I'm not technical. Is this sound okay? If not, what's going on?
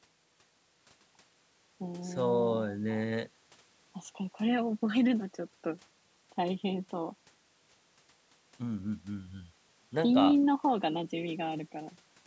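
Yes, nothing is wrong here: the speech simply went through a call's microphone processing, which trims the deepest bass and keeps nothing above 8 kHz, exactly as it should.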